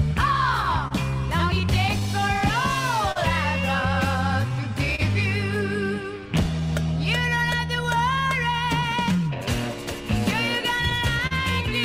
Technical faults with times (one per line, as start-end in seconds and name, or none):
0.00-11.85 clock drift between sender and receiver
0.88-0.92 short stall from a late packet
1.61-10.04 repeated timing corrections
3.12-3.17 short stall from a late packet
4.95-5.00 short stall from a late packet
11.27-11.33 short stall from a late packet